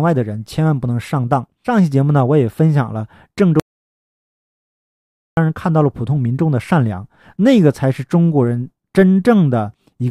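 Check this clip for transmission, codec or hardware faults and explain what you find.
One fault is present: an audio dropout to silence from 3.60 s to 5.37 s, removing about 1.77 s of the speech. The input signal was likely lost for that stretch, through a disconnected device, a failed link or a stray mute, while recording or encoding carried on and filled the gap with silence. The speech cuts off mid-flow, the background room tone vanishes along with it, and the speech resumes abruptly with whatever was said in between missing.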